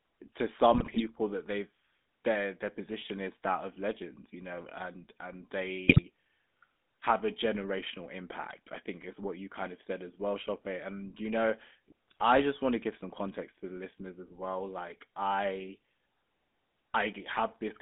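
The whole clip carries the GSM full-rate codec: the speech has a buzzy, gravelly grain, consistent with a 13 kbps GSM encoder, and it sits in a 200 Hz to 3.6 kHz telephone band. On a spectrogram, nothing appears above 3.6 kHz, and the harmonics look coarse and smeared. GSM bit errors strike at 0.70–1.01 s, before "that they've their their"; at 5.88–6.04 s, after "you know and and"; and at 12.08–12.23 s, between "you know" and "I just want to". Corrupted filter, pitch and gain values turn the speech into squawks, pops and gargling. These show as level spikes on the waveform and as distorted spectral blotches.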